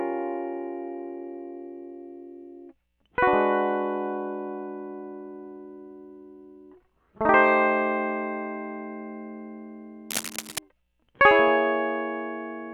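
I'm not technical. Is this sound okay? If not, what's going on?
No. From 10.10 to 10.59 seconds, a burst of scratching and rustling sits over the music, nearly as loud as the music itself. This is cable scratch noise. It is likely a worn cable or plug being moved, so the connection flickers.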